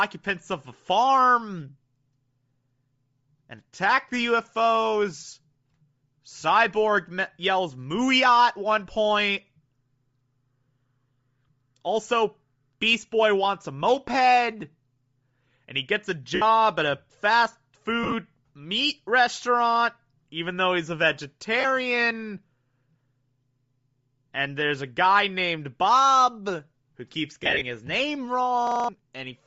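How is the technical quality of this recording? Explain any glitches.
The recording is compromised: a codec coloring runs through the whole clip, there are four short dropouts, and a stuttering loop appears near the end.

Throughout, the speech has a breathy, grainy top end where the upper spectrum has been thinned out and replaced with noise. That's most likely Bluetooth LC3 compression at a low bitrate, and what you hear points to roughly 32 kbps with 7.5 ms frames.

There are lost LE Audio frames at 16.35 s (67.5 ms, between "he gets a" and "at a fast"), 18.03 s (67.5 ms scattered over 90 ms, before "meat restaurant even though"), 21.60 s (37.5 ms) and 27.43 s (120 ms scattered over 180 ms). At each one, the decoder repeats the last spectrum with scrambled phase, so the sound briefly smears into noise.

There's a system hang loop at 28.67 s, right after "his name". The system froze while the hardware kept replaying its ring buffer, so one 42.67 ms slice loops five times. 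That gives a 23.4 Hz buzzy stutter lasting about a fifth of a second, which fits a 2048-sample buffer.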